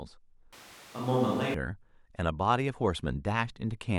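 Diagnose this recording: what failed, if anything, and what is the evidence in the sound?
The close microphone's feed most likely dropped out at the analogue capture stage, so from 0.53 s to 1.54 s the recording falls back to a more distant pickup, a switch to a distant microphone. The speech turns roomy and hollow abruptly at 0.53 s, loses low-end body, and carries room noise roughly 25 dB below the speech, while the overall level stays about the same. At 1.54 s the close, dry sound returns just as suddenly.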